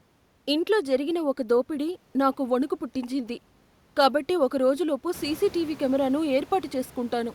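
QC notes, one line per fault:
No fault to note; the room noise rising by about 18 dB after about 5 s belongs to the recording.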